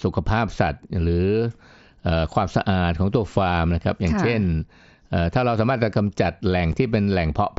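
A single voice packet, about 7.5 ms of audio, failed to arrive between headset and phone at 6.72 s. The gap was not concealed: nothing was filled in to cover it, so this is unconcealed Bluetooth headset packet loss in a speech clip. The speech drops to a brief hole with hard edges. Its length fits one missing packet on the wideband mSBC headset link, which carries the speech up to 8 kHz with light grain.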